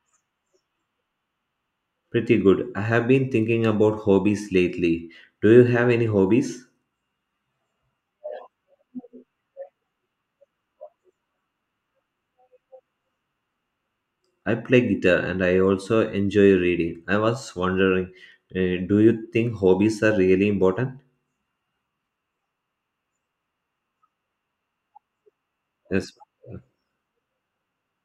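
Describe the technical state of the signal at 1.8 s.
Nothing is wrong with the signal at 1.8 s; the speech passes through intact at that moment.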